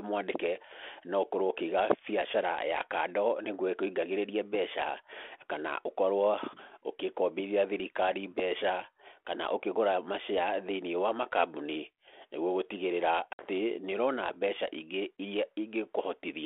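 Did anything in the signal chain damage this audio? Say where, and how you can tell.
Yes, at the network stage. Packet loss on an ADPCM call leaves a hard-edged silent hole at 13.33 to 13.42 s, with about 60 ms and a handful of packets gone. The G.726 decoder's adaptive predictor and step size lose sync with the sender's, so the restart is mismatched until they catch up.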